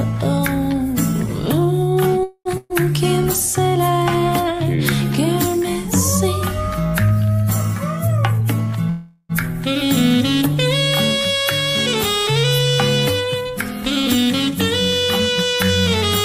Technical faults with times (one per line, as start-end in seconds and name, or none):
2.23-2.48 call audio freeze
2.57-2.74 burst of packet loss
8.08-8.83 jitter buffer speed-up
8.90-9.32 call audio freeze
13.65-14.52 jitter buffer speed-up